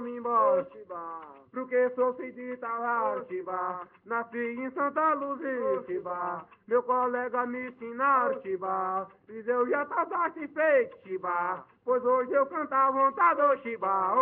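Nothing in the recording stood out as a technical problem on listening.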